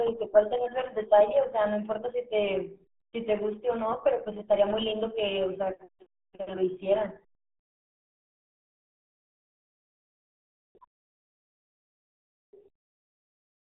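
Throughout, the speech sounds muffled and gargly, squeezed into a narrow band of roughly 250 Hz to 3.5 kHz with nothing above 3.8 kHz. This is heavy RealAudio 14.4 codec damage, fitting RealAudio 1's 8 kbit/s coding built for dial-up modems.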